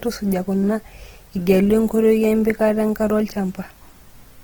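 Across the whole speech clip the sound is rough and grainy, and the damage is plainly audible. The top end still reaches about 20.2 kHz, so the sound is not muffled. The likely cause is Opus compression in its CELT music mode at a low bitrate, around 16 kbps. Short of bits, the encoder keeps each band's energy but fills in detail with folded or noise-like content.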